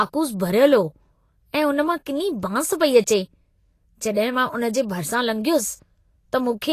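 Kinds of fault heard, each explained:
Vorbis compression: The speech carries a grainy, hissy sheen across its whole length, with sibilants turned to coarse noise and consonant onsets smeared, and nothing survives above 14.2 kHz. This is likely a low-rate lossy encode, plainly audible and consistent with roughly 32 kbps, where the treble is quantised so coarsely that detail becomes noise. A spectrogram shows a hard ceiling at 14.2 kHz and speckled, patchy upper bands instead of clean harmonics.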